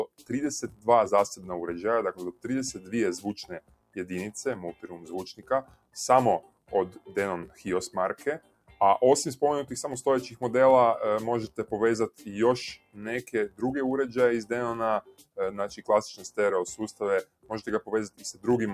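A steady buzz near 43.1 Hz runs through the whole clip. It is a filter restarted on every block: the filter drops its state at each boundary and begins from silence, so each block starts with a small tick whose loudness follows the signal, which fits a 1024-sample block. A noise suppressor applied to music or sounds is also active throughout. It treats sustained material as noise and keeps pulling it down by roughly 10 dB, so the level pumps while attacks pass more cleanly than what holds after them. The sound is cut by the noise suppressor more heavily at 0.07–1.46 s, 2.32–3.97 s, 4.73–7.63 s, 8.39–8.8 s, 11.48–13.62 s, 15.01–16.38 s and 16.93–18.46 s. In each stretch, held or fading parts sink by about 14 to 18 dB and tails end early, for a few hundred milliseconds up to about a second and a half at a time.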